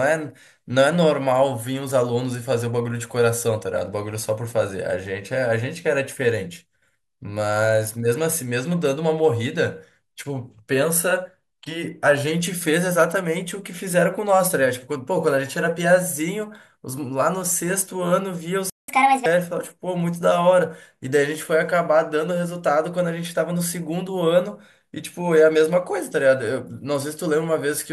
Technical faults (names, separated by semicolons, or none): playback stall; catch-up at higher speed